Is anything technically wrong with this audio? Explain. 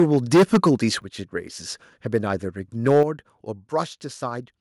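Yes, the speech has two recurring faults.

Microphone overload runs from 0.00 to 0.74 s, about 14 dB past full scale, and again from 2.86 to 3.03 s, about 4 dB over. The likely cause is an input volume set too high, so about a tenth of the samples flatten against the converter's ceiling. The loudest syllables sound harsh and crackly. On the waveform the peak tops are squared off, and the spectrogram shows smeared high-frequency energy.

Microphone volume stepped down at 1.02 s and again at 3.03 s. Each time, speech and background fall together by about 7 dB, and the second drop comes right after the clipped burst. This is likely the call software cutting the device gain once it detected clipping. The waveform envelope shrinks abruptly, and the spectrogram dims evenly at that instant.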